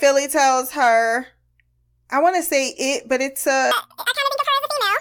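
Speech runs normally until 3.71 s, then the audio is read two samples at a time (double speed) to the end at 5.01 s. The sound plays twice as fast and an octave higher. Pairs of samples are treated as one frame, as if stereo.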